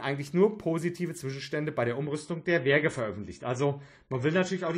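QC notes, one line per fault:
2.01–4.77 s, adaptive stream at a lower bitrate: the stream switches to a leaner encode, fitting about 24 kbit/s AAC, and abruptly loses everything above 10 kHz without any gap.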